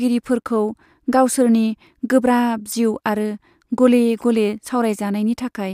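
No technical faults can be heard anywhere in this recording.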